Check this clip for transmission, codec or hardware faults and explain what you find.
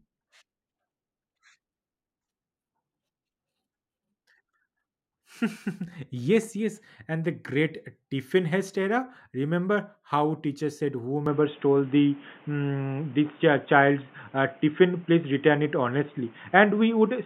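Input switched to a poorer device, from 11.26 s to the end, right after "how teacher said". The speech abruptly turns dull and boxy with no gap at the switch, which points most likely to the system changing to another microphone or a headset's call profile. Nothing above 3.6 kHz comes through, the level shifts by around 5 dB, and a new background noise appears roughly 30 dB below the speech.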